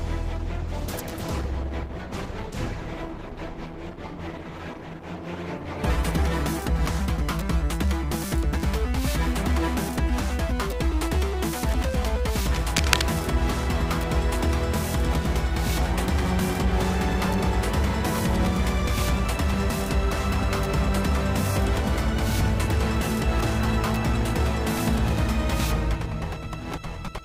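From 0.31 to 8.33 s, a call bitrate drop takes the encoder from 128 to 12 kbps. The sound turns coarse and muffled, staying worst for about 5.5 s. At 12.46 to 13.02 s, scratchy, uneven bursts of noise sit only slightly below the sound. This is cable scratch noise, likely from a worn connector being moved.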